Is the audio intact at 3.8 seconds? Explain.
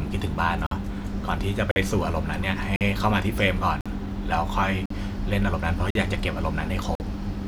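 No. A gap between chunks appears from 3.81 to 3.86 s: silence was inserted at a join between 1 s chunks, cutting the speech with a 48 ms hole.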